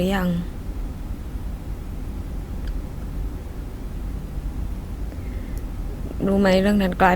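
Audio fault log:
1.12 s to the end, adaptive stream at a lower bitrate: the speech suddenly turns more smeared, with stronger codec artefacts but no gap. The player switched to a lower-bitrate version, which fits Opus dropping from 64 to 32 kbit/s.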